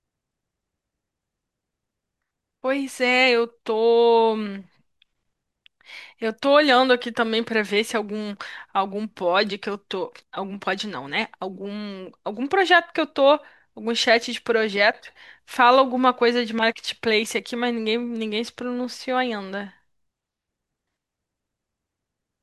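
No technical faults are audible anywhere in this recording of speech.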